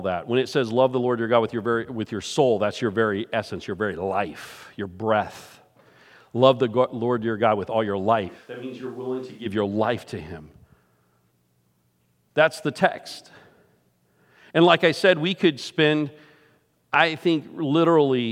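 Right after "with all your", at 8.30 s, the sound turns suddenly roomy and hollow, loses its bass, drops about 10 dB, and picks up a noise floor roughly 30 dB below the speech. This is likely a switch to a distant microphone after the close one dropped out. It snaps back at 9.45 s, just before "your life to him".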